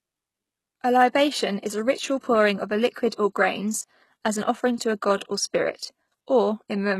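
From start to finish the speech carries plainly audible compression damage. The top of the spectrum is bright but synthetic, and nothing sounds above 12.3 kHz. The s sounds come out gritty and lispy. The treble has a metallic sheen that does not match the lower harmonics. This is likely HE-AAC compression. The codec keeps only the lower band and rebuilds the highs by copying lower bands upward under a coarse envelope. The damage fits a very low bitrate, around 16 kbps.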